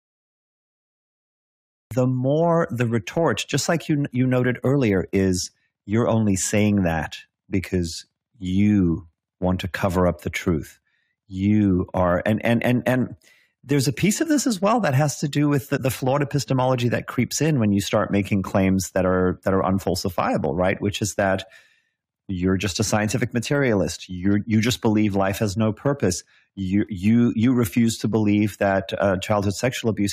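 Speech recording with two faults. A cut-off start leaves digital silence until 1.91 s, where audio enters abruptly mid-sound before "more the retort just", with no natural attack because capture began late. Between 15.76 and 15.78 s, after "has to do with" and before "flawed epistemology that creeps", compressed frames were skipped: roughly 50 ms of audio is missing and the speech jumps ahead.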